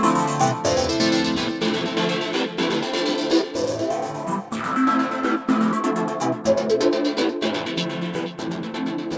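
No technical faults can be heard in this audio. It comes through a WebRTC call path working as expected, with nothing above 8 kHz, which fits a wideband codec such as G.722.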